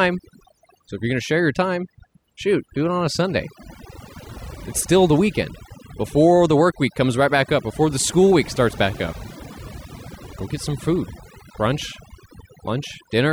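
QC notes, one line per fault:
Throughout, overdone noise removal: the background drops and breaks up into twinkling specks. A noise reducer pushed too hard is muting individual frequency bands near its noise estimate, taking quieter parts of the voice along with them.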